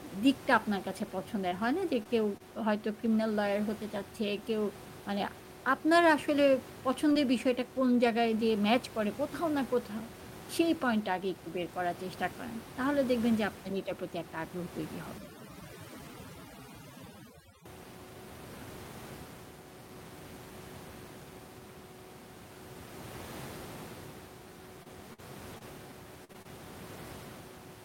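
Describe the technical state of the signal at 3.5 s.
At 3.5 s the speech signal is intact, with only the room's own background noise, about 16 dB below the speech, heard underneath it.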